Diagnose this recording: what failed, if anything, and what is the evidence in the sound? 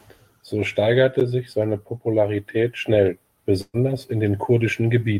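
A burst of packet loss hits the speech at 3.61 s and runs to 3.77 s, so the failure sits in the network stage. For about 120 ms the receiver's concealment repeats the last received sound and fades it down, heard as a held, decaying buzz or hiss. After roughly 30 ms of silence, playback resumes further on. About 120 ms of real audio never arrived, so the speech jumps ahead rather than picking up where it stopped.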